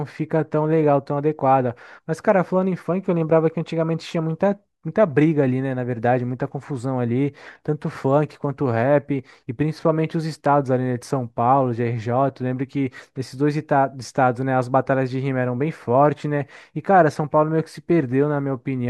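Nothing here goes wrong technically; the speech just runs along from the first moment to the last without anything breaking in.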